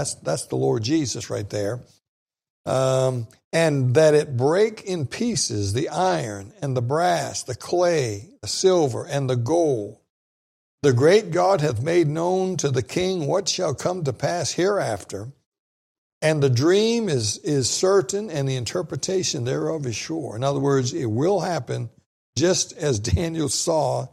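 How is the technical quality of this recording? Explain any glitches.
No technical faults are audible.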